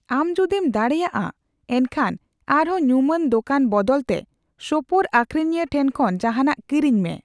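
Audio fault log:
No fault is heard in this speech recording.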